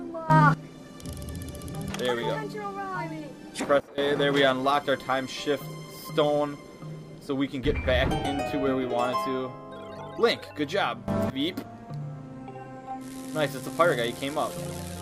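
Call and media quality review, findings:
Sudden gain jump, three events. 0.30–0.54 s: level steps up about 14 dB. 3.80–3.98 s: level drops about 16 dB. 11.08–11.30 s: level steps up about 18 dB. Audio and background noise shift together, at once, with no ramp. Likely cause: digital gain stage applying a new setting or bit shift between adjacent samples, without smoothing. Check gain control and AGC handoff.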